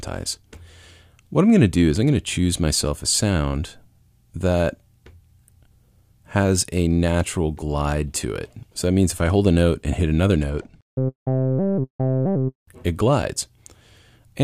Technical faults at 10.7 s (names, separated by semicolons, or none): channel delay (comb filtering)